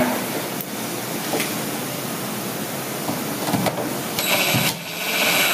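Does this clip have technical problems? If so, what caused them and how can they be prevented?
Yes. Gain pumping runs throughout. The input gain was likely set far too high, so a fast limiter clamps each loud sound, making the gain swing by about 20 dB. Lowering the input gain so the limiter seldom engages would prevent it.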